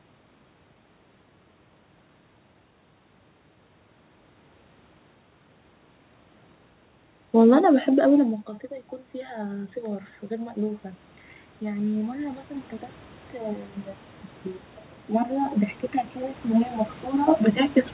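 After the speech drops around 8 s, automatic gain rising pushes the level up over 9.31–10.89 s (about 6 dB), 11.6–12.49 s (about 4 dB) and 15.07–17.84 s (about 7 dB). Unlike a talker moving closer, the room noise swells along with the voice.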